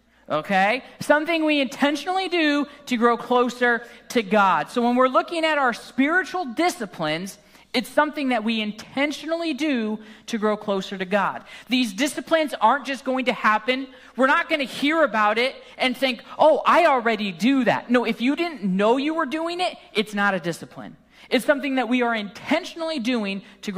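No technical faults occur anywhere in the audio.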